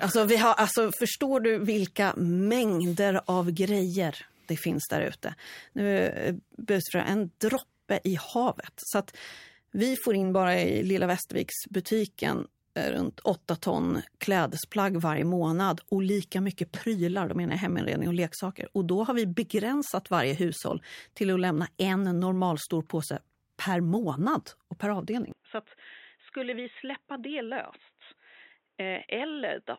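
The recording likely switched its input to a poorer device at 25.32 s, right after "per månad och per", and stays on it to the end. The new device passes nothing above 3.9 kHz, so the speech abruptly turns dull and boxy with no gap at the switch. The level drops by roughly 10 dB, and a faint new background noise sits far below the speech.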